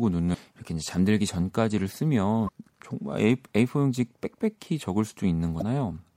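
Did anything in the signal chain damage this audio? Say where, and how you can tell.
Yes: brief glitches at 0.30–0.35, 2.45–2.49 and 5.58–5.62 s reveal damaged data in the compressed stream, where the decoder lost frame sync.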